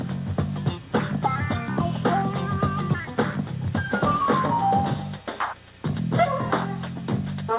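No technical faults can be heard anywhere here.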